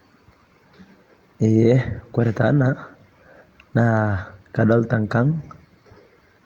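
No technical faults can be heard anywhere in the speech recording; the signal stays continuous and steady throughout.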